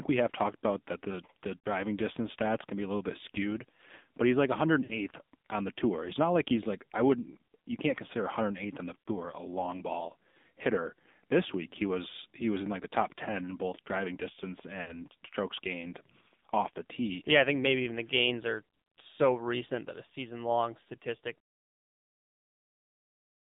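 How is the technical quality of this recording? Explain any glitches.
The recording has plainly audible mobile-codec damage throughout and four brief dropouts where speech frames were lost.

AMR narrowband mobile codec, for the whole clip: the speech has passed through the 2G/3G narrowband speech codec, which rebuilds the voice from a vocal-tract model excited by a few pulses per subframe rather than sending the waveform itself. The band is confined to roughly 200 Hz to 3.7 kHz, so the speech sounds thin and muffled. The low bit budget, which fits the 7.4 kbps mode, makes the voice plainly buzzy and synthetic.

Lost AMR speech frames, at 1.58–1.66 s (between "about that the the" and "distance stats can be"), 4.84–4.99 s (between "skewed but he's like" and "on the tour"), 9.03–9.08 s (between "on the" and "a long ball hitter"), and 14.82–14.95 s. Radio errors corrupted frames, so the decoder held the last good pitch and vocal-tract settings at falling gain. 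Each gap sounds like a short smeared warble and dip covering about 40 to 60 ms of lost audio, which fits two or three lost 20 ms frames. The speech returns weak or rough for a moment.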